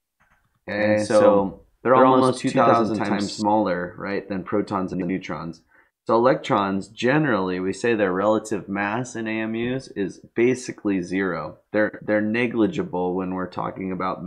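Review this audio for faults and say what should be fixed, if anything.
Doubled audio track, from the start to 3.42 s: a second full-band copy of the sound runs about a tenth of a second behind, at much the same level, with no decay or room colour, and it cuts off abruptly at 3.42 s. The likely cause is the sound being captured a second time through a slower path, or an edit holding two copies out of step. Prevent it by monitoring through a single capture path and checking edits for overlapping duplicate regions.

Frames out of order, at 4.93 to 5.10 s and 11.88 to 12.00 s: in each stretch two neighbouring blocks swap places, 78.4 ms each in the first and 52.2 ms each in the second, which points to runs of three and two codec frames. The result is a garbled flutter, and no time is lost. Prevent it by reordering frames by sequence number before decoding.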